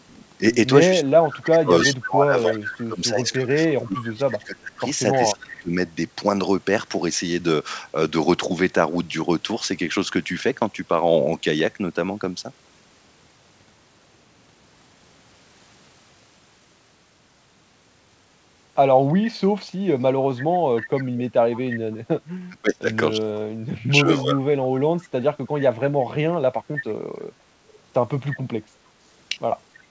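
Speech suppressed in double talk affects this speech recording from 0.89 to 5.74 s (about three seconds of it dipping), briefly at 21.7 to 21.87 s, and again from 22.47 to 25.01 s. The voice sinks by about 25 to 30 dB or breaks into pieces, likely because an echo canceller, unable to tell the talker from loudspeaker echo while both sides spoke, pulled everything down. Echo leak appears at 1.32 to 1.9 s, 2.56 to 2.66 s, 5.13 to 5.61 s and 20.77 to 22.2 s as a copy of the voice trailing 306 ms behind. It sits about 5 to 20 dB below the speech, likely residue that a speakerphone's echo canceller failed to remove and sent back down the line.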